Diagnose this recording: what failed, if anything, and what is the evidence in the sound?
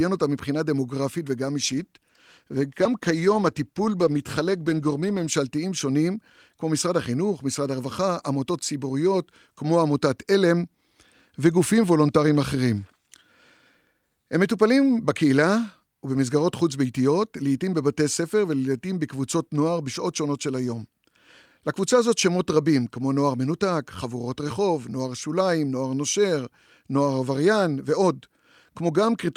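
A call bitrate drop at the codec stage, driven by the call's bandwidth estimate. From 1.64 s to 5.41 s the speech turns coarse and rough, then returns to its earlier clarity. The degradation holds steady for about 3.7 s, which fits the encoder being told to cut its rate from around 48 kbps to about 18 kbps. With fewer bits per frame, the codec quantises the spectrum more crudely until the estimate recovers.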